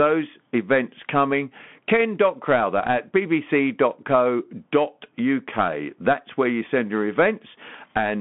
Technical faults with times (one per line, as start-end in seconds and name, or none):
0.00-8.20 Bluetooth CVSD headset codec